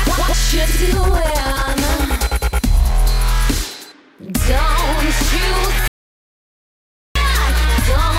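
At 5.88 s the music cuts out abruptly and stays silent until 7.15 s, when it returns mid-flow. Nothing of the room or instruments remains in the gap, and roughly 1.28 s of the performance is simply gone. This is an audio dropout to silence: the input signal was likely lost for that stretch, through a disconnected source or broken link, while the recording kept writing silence.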